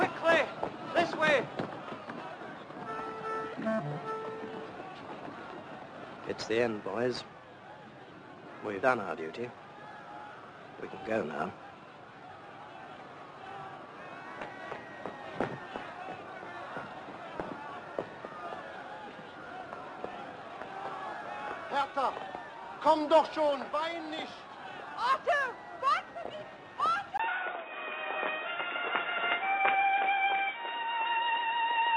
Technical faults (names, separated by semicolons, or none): input switched to a poorer device